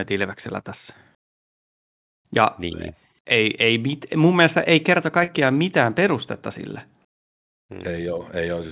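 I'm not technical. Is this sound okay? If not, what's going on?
No. At 5.24 to 5.30 s there's a short concealed packet loss: about 40 ms of the call arrived too late, so the receiver patched the gap, leaving a brief smear.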